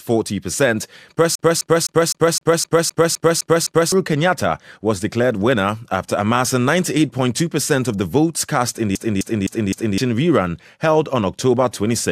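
CD stuck on one turn, 1.35 to 3.92 s and again 8.95 to 9.98 s: a scratch keeps knocking the laser back, replaying the same 0.26 s of speech with a brief mute at each jump.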